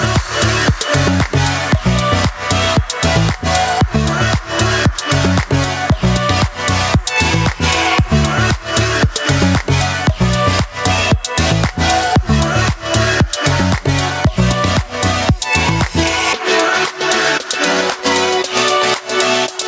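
Gain pumping runs through the whole clip, most likely from input gain set far too high with a fast limiter clamping down on each loud sound. The gain ducks by around 10 dB under loud moments, squashing the dynamics.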